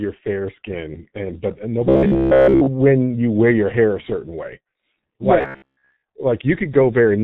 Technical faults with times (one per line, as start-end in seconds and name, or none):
0.00-7.23 G.723.1 codec
1.89-2.67 robotic sound from repeated short buffers
5.41-6.04 robotic sound from repeated short buffers